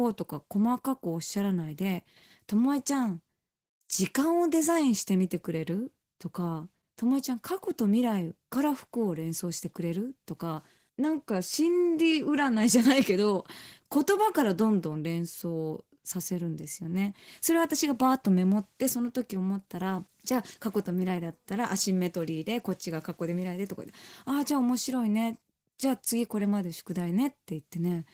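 Throughout, Opus voice compression in hybrid mode codes the speech coarsely, at a rate that fits about 16 kbps, leaving plainly audible codec damage across the full band.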